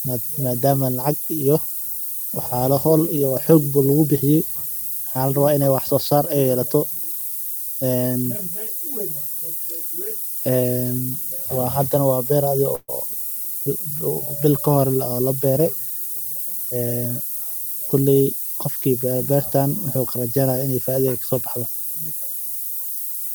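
Low bit depth with noise shaping runs throughout. The coarse steps fit about 5 bits. The rounding error is pushed upward into a thin, rising hiss almost as loud as the speech.

From 12.75 to 12.99 s, a burst of packet loss occurs. The last sound is held and fades for 127 ms. Speech then resumes with 120 ms missing.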